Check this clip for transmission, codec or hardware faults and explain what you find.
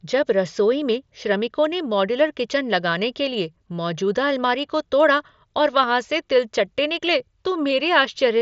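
No transmission, codec or hardware faults turn up in this clip.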